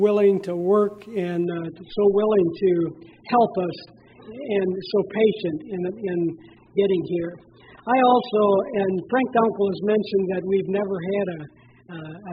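At 1.45 s the sound suddenly gets duller and grainier and stays that way right to the end. That's an adaptive stream at a lower bitrate: the connection slowed, so the player swapped to a much thinner version of the same stream with no gap at the switch. Nothing above about 5.1 kHz survives, and the codec smearing and swirl jump up, which fits a drop from a healthy rate to something near 8 kbit/s.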